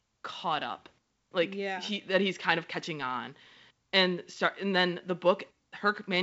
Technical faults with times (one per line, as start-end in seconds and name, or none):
none